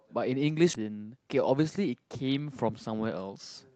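At 0.73 s the speech lurches forward with almost no gap, joining two points that should be well apart. This is a skip ahead: around 0.7 s of audio was dropped while later packets were already waiting, then the two sides were spliced together.

From 1.38 to 2.09 s the speech runs about 7% fast at its normal pitch and sounds hurried. This is a jitter buffer speed-up: holding more audio than it wanted, the receiver trimmed short pitch-period slices repeatedly, removing roughly 50 ms in total.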